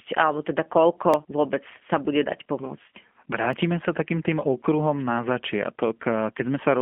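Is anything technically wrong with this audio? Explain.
Yes, there are two problems.

The whole clip has passed through a G.729 codec. The coder doesn't send the speech waveform. It sends a vocal tract filter, a pitch predictor and a few pulses in each 10 ms frame, and the receiver rebuilds the voice from those. That parameter-based rebuilding is plainly audible here, which fits the 8 kbit/s G.729A variant. The speech sits in a telephone band of roughly 200 Hz to 3.4 kHz, with nothing above 3.5 kHz. It sounds muffled, slightly rough and synthetic.

There are also two blocks of digital silence. Each is a short run of samples that was never filled and was left as zeros, most likely because the output buffer wasn't written in time. The first comes at 1.14 s, between "alebo teda" and "vôbec sa bude dať". It lasts about 0.73 ms, which fits a 32-sample block. The second comes at 3.53 s, just before "sa takým tým okruhom", and lasts about 0.52 ms. 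Because the signal drops to zero and returns with no fade, each dropout is heard as a small click or tick rather than as a gap.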